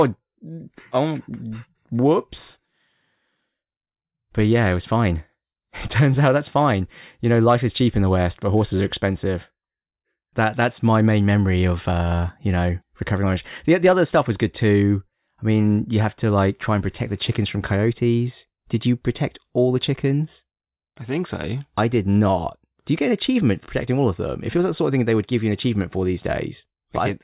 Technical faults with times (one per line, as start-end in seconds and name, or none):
none